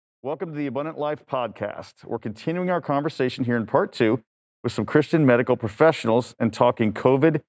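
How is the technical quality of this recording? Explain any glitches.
The speech swells in level twice, from automatic gain rising. Between 0.38 and 1.61 s the voice and the room behind it climb together by about 5 dB, then again from 2.43 to 4.31 s by about 7 dB. Each rise is smooth, not a jump. The call's gain control judged the input too quiet and raised its gain gradually, lifting everything at once. The call microphone path is audible in the missing content above 8 kHz.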